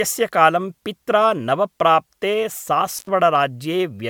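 From the start, the speech has a swirly, hollow smear and blurred consonant attacks, which is likely generation loss: about five successive MP3 passes near 135 kbit/s, each requantising on a shifted frame grid. That stacks more artefact than a single encode at that rate would leave, and the top end stops at 20 kHz.

At 2.97 s, an intermittent contact opens the line for about 86 ms, to 3.09 s. The audio drops out with crackle at both edges and faint hiss in the gap. A clean digital dropout, by contrast, would leave plain silence in the gap, without hiss.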